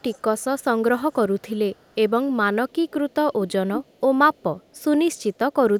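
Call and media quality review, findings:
Echo leak: a delayed copy of the speech, about half a second behind, at 0.0–0.64, 1.12–1.96, 2.69–3.15, 3.49–4.0 and 4.34–5.54 s. Mostly very low, but loud at 3.49–4.0. Likely far-end loudspeaker pickup that the echo canceller isn't fully removing.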